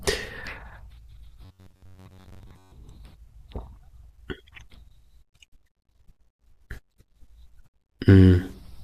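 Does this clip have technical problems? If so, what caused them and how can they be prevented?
Yes. From 1.45 to 2.72 s the speech becomes robotic sound from repeated short buffers: a rigid, metallic buzz near 94 Hz that roughly tracks the speech. The likely cause is audio arriving too slowly, so a chunk of about 10.7 ms is replayed for roughly 70% of that span while real audio is dropped. A spectrogram would show flat harmonic lines spaced 94 Hz apart, and the waveform would show identical repeating cycles. Larger jitter buffers and steadier network or processing throughput would prevent it.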